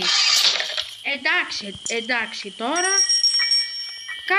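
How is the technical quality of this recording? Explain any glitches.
The recording has two faults: a steady buzz running through the whole clip, and a stretch in the middle where the sound turns hissier.

Block size mismatch (truncated) runs throughout. One stage writes blocks that fit a 1024-sample size, and the next stage reads fewer, so the tail of each block is dropped. Each cut repeats at 43.1 Hz, which gives a steady buzz. The speed stays essentially normal, at 1.0 times, so the trimmed portion is tiny. Unlike a mains hum, this buzz is made of regular splice clicks locked to the block rate.

Digital radio blending to analogue occurs from 0.97 to 3.89 s. The receiver lost its digital stream and cross-faded over about 295 ms to the FM broadcast, then faded back again. During that span the level drops by about 1 dB. Hiss sits roughly 30 dB below the signal. Unlike a codec dropout, the transitions are smooth fades rather than abrupt cuts.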